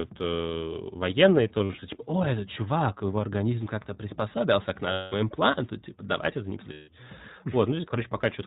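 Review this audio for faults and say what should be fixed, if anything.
iLBC codec, throughout: the speech is band-limited to 4 kHz and sounds plainly rough and synthetic. Each 20 ms frame's excitation is coded independently, and the coarseness fits a 15.2 kbps rate. Prevent it by using a wideband codec or higher-quality path where the link allows.

Lost iLBC frames at 1.58 to 1.83 s, 4.92 to 5.14 s and 6.72 to 6.89 s: the gaps become held, buzzy, breathy vowels as the decoder repeats the last pitch cycle with added noise. The first gap is about 140 ms of dropouts scattered in short runs of up to around 70 ms. The second is a 200 ms block and the third a 160 ms block. Each recovers almost immediately because the frames decode independently. Prevent it by fixing packet loss on the network path or adding redundancy such as FEC.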